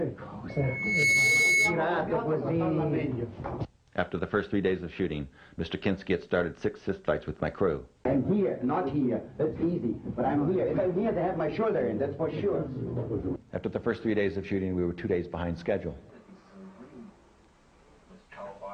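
A loudspeaker feedback squeal runs from 0.49 to 1.88 s: a steady 2.2 kHz tone swells over roughly half a second to sit around 5 dB above the audio. The microphone is re-amplifying its own loudspeaker output, and on a spectrogram this shows as one bright horizontal line.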